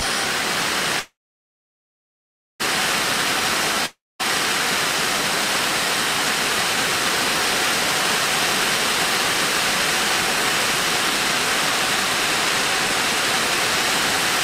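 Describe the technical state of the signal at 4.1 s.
At 4.1 s you're inside a gap running from about 3.86 to 4.21 s that sounds like a long network dropout. Roughly a third of a second of audio never plays; the last sound smears into a fading buzz, then about 0.22 s of near-silence, likely packets that never arrived.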